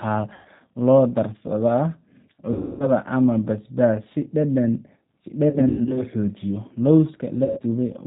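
The whole clip carries the G.729 codec sound expected at 8 kbit/s: nothing above 4 kHz, and a rough, slightly synthetic edge from rebuilding speech out of a vocal tract filter, a pitch predictor and a few pulses per frame. Packet loss concealed by the speech codec then hits four times: 0.33–0.48 s (about 120 ms lost), 2.53–2.92 s (270 ms), 5.50–6.03 s (180 ms scattered across 360 ms, longest run 90 ms) and 7.45–7.60 s (120 ms). Each time, the decoder stretches its last frame into a buzzy tone or a coloured noise that fades, and the speech stays weak briefly after packets resume.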